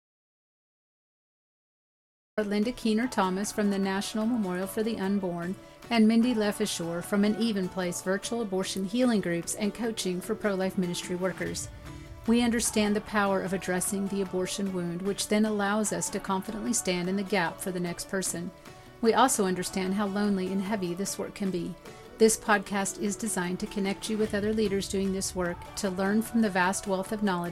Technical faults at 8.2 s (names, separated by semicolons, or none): none